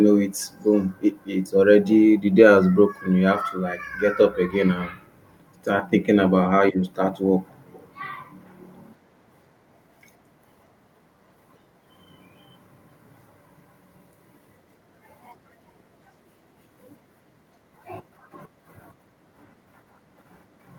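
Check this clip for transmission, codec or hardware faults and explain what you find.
Three brief bursts of echo leak appear in the speech, at 0.60–0.67 s, 7.48–7.54 s and 7.72–7.88 s. Each is a faint delayed copy of the voice, 230 ms late in the first burst and 346 ms late in the other two. They are very quiet, roughly 40 dB below the speech in the first two and somewhat louder, about 30 dB down, in the last. The likely cause is a far-end loudspeaker echo canceller letting residual pickup slip back into the call. On a spectrogram, each burst shows up as a weak repeat of the preceding harmonic pattern, offset in time. In the waveform it is a small ghost ripple.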